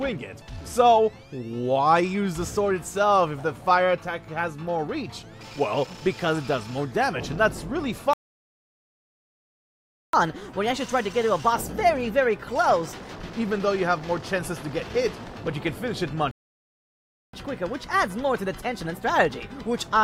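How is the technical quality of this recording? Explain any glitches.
The recording is marred by two interruptions, each followed by a sped-up stretch.

Playback stall, 8.13 to 10.13 s and again 16.31 to 17.33 s: the sound cuts out mid-flow into silence, first for 2.0 s, then for about 1.02 s. The likely cause is the player running dry of buffered data or its playback thread being blocked, so nothing reaches the output until it recovers and resumes.

Catch-up at higher speed, 10.13 to 13.13 s and 17.33 s to the end: after each gap the player resamples its backlog at 1.15 times normal speed to recover lost time. Everything runs audibly faster and sits roughly two semitones sharp. The first burst settles back to normal pitch and pace after three seconds, while the second is still running fast when the clip ends.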